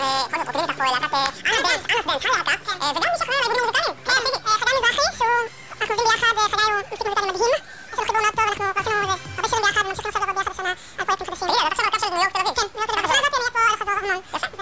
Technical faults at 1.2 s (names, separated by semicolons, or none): wrong sample rate